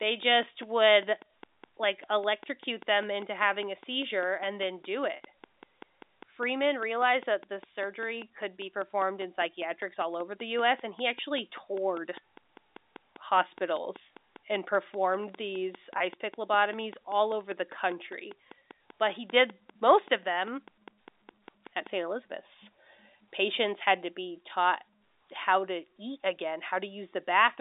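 From 0.03 s to 21.9 s a steady ticking runs under the speech and through its pauses, regular at about five clicks per second, some hundred alike pops peaking about 5 dB above the speech. This train of clicks is likely interference or a faulty connection injecting pulses.

At 5.16 s the speech briefly freezes into a held, buzzy tone for 40 ms, and at 15.98 s the same happens for 20 ms. This is packet loss with pitch repetition: the receiver replayed the last pitch period to bridge the gaps, which fit two 20 ms packets and then one.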